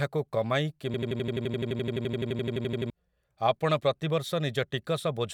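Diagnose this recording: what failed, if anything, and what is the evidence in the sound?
A system hang loop runs from 0.94 to 2.90 s at the driver or buffer stage. One 85 ms slice of speech repeats exactly at 11.7 Hz, a machine-gun stutter, while the hardware replays a stalled ring buffer, which fits a 4096-sample buffer. About two seconds of audio are lost.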